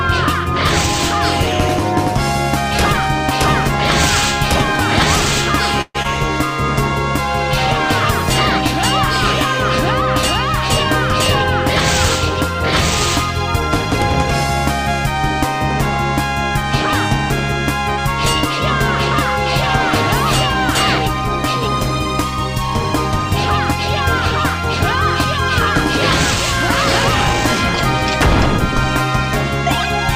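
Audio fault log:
5.81 to 5.96 s, call audio freeze: the sound stalls and is stretched for about 0.13 s as a fading continuation of the last moment, ending in roughly 40 ms of silence before the audio resumes exactly where it left off, so nothing is lost but the timeline is pushed back. This is likely a jitter buffer running dry while packets were held up in transit, with the receiver padding the wait until they arrived.
6.02 s, short concealed packet loss: a brief smear, lasting a few hundredths of a second, where about 40 ms of audio never arrived in time to be decoded. The receiver papered over the hole with under 20 ms of synthetic continuation built from the preceding sound, then blended back into real audio, dropping the rest outright. Coming straight after the freeze, it also pulls the accumulated delay back by about 20 ms.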